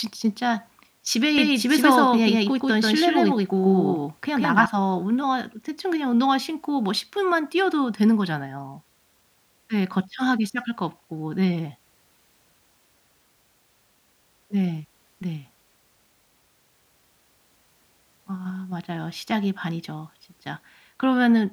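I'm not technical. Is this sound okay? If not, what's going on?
No. From 1.38 to 4.66 s there is a doubled audio track: the speech was likely captured twice, once through a slower path, and both copies were mixed. A second, equally loud copy trails about a sixth of a second behind, like a hard echo, and stops abruptly.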